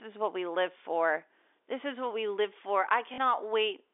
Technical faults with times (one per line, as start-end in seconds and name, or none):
3.14-3.18 packet loss with last packet repeated